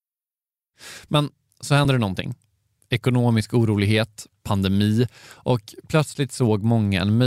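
At 1.82 s the speech hits a short burst of damaged data in the compressed stream, lasting about 44 ms. A stretch of the coded bytes got corrupted, so the decoder misread those frames, lost sync and had to hunt for the next valid header. You hear it as a quick glitch.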